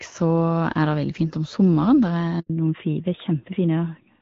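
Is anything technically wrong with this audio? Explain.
Yes, there are two related faults. A handover gap runs from 2.40 to 2.50 s: while the call switched networks, no speech frames got through, so the sound fades out within a few tens of milliseconds and stays silent for 100 ms before the new link picks up. A fallback to narrowband follows at 2.50 s and lasts to the end. Before it, the clear HD Voice sound fits AMR-WB at around 12.65 kbit/s. After it, the call continues on a narrowband codec, likely AMR-NB at around 12.2 kbit/s, so everything above 4 kHz disappears and the speech sounds duller and rougher.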